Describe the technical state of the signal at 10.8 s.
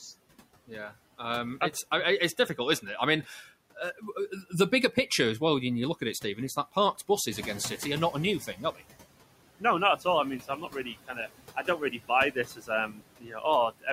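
At 10.8 s the speech is being cut by the noise suppressor, within a span from 10.40 to 11.17 s just after "all I mean." The suppressor mistook soft parts of the speech for noise and pulled them down with the background, by about 14 dB at the deepest point, across roughly a fifth of a second in total. Those sounds come out swallowed and faint. Unlike a dropout, the signal never vanishes; only the quieter speech components sink.

Noise suppressor artifacts, present throughout the clip, also affect this moment. The suppressor lowers the bands it judges to be steady noise by about 16 dB, frame by frame, so the background sinks between the words and rises under them. The room noise is louder from about 7.5 s on.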